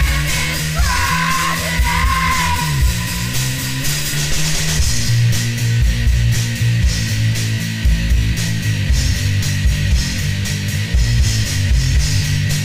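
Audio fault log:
Throughout: crude rate conversion, samples dropped unfiltered as in a 48 to 44.1 kHz change; gritty inharmonic fizz about 25 dB down, seen as spurious spectrogram tones.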